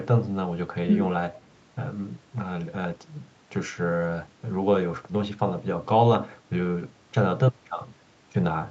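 Echo leak at 1.34 to 1.46 s: a brief, faint copy of the speech arrives 431 ms late, well below the main level. The likely cause is a far-end echo canceller that let a scrap of loudspeaker pickup slip back.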